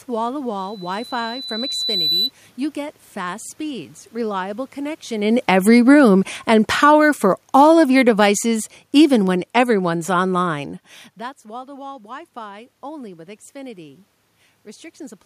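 From 5.14 s, just after "get fast speeds reliable", the automatic gain falls. The talker moves around 5 s. The gain control judges the input too loud and pulls its gain down slowly. Over about five seconds, to 10.66 s, the level drops by about 12 dB. Speech and room noise sink together. That shared sag marks the gain control, not the talker.

At 11.19 s the automatic gain starts rising. Around 11 s the talker moves back, and the input drops by about 20 dB. The gain control hears this as too quiet and raises its gain gradually. It recovers only about 4 dB by 14.06 s. Voice and background swell together over nearly three seconds. The room noise comes up with the voice, so the lift comes from the gain control, not the talker.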